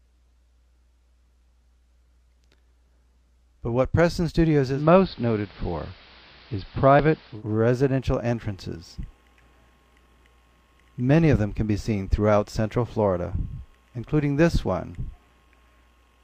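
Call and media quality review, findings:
Digital radio blending to analogue, 4.68 s to 7.43 s. Receiver lost the digital stream and cross-faded over about 165 ms to the station's AM feed, then back. Audio goes dull; hiss comes up, roughly 25 dB under the signal; level shifts about 1 dB. Probable component: the hybrid tuner's blend logic. Worth checking reception at the source.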